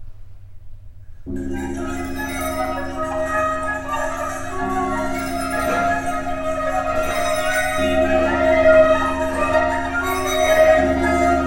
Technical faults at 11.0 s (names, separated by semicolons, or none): none